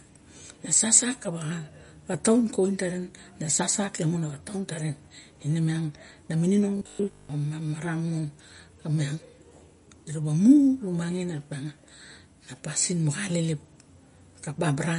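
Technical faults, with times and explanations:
throughout: MP3 compression, likely at a low bitrate, plainly audible as a watery, swirly texture, with nothing above 10.5 kHz; the spectrogram shows a flat treble ceiling and flickering holes.
6.77–7.29 s: robotic sound from repeated short buffers, a rigid metallic 50 Hz buzz, likely from 20 ms chunks repeated for most of the span; the waveform shows near-identical repeating cycles.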